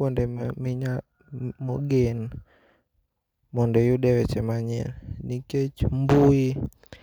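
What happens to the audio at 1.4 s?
Nothing goes wrong at 1.4 s: the speech carries straight through that moment with no dropout, click, distortion or other audible fault.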